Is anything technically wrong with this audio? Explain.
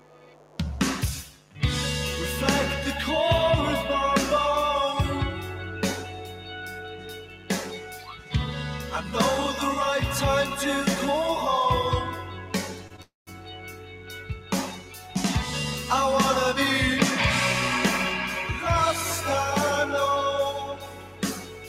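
Yes, there are several problems.

A mains buzz runs all the way through: a raspy 50 Hz hum with harmonics, sitting about 20 dB below the sound, from switching spikes leaking into the signal chain.

A noise suppressor tuned for speech was left on for this material. It treats steady parts as noise, so levels pump by around 10 dB and tails thin out.

You can hear sound cut by the noise suppressor at 0.0–0.59 s, 1.28–1.58 s, 6.01–7.5 s, 7.72–8.34 s, 12.15–14.52 s, 14.70–15.16 s and from 20.65 s to the end. Sustained parts sink by about 8 to 10 dB each time.

There are two short stalls from late packets, at 12.87–12.92 s (27 ms) and 12.96–13.00 s (19 ms). Each time the jitter buffer briefly ran dry and the last sound was stretched, so it's held slightly too long with a slight buzz or dip.

Right after that, at 13.02–13.29 s, there's a call audio freeze: the sound hangs for about 250 ms, including roughly 170 ms of silence, before resuming where it stopped. 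That's likely from packets held up in transit.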